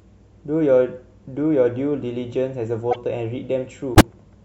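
A corrupt frame decoded appears in the speech at 2.91–2.96 s and again at 3.95–4.01 s. Flipped bits sent misread energy to the wrong frequencies. Each time, a brief chirp, squeak or burst of noise spans what sounds like a couple of frames, and the second burst is much louder.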